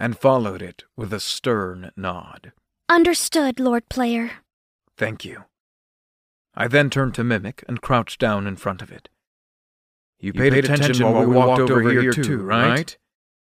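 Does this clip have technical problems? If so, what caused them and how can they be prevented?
Yes. A doubled audio track starts abruptly at 10.33 s and runs to the end: an unaltered full-band copy of the speech trails about a tenth of a second behind at roughly equal level, with no decay or room colour. The likely cause is the same source being captured twice, once through a slower path, or an edit leaving two copies out of step. Monitoring a single capture route and muting duplicate inputs or overlapping clips prevents it.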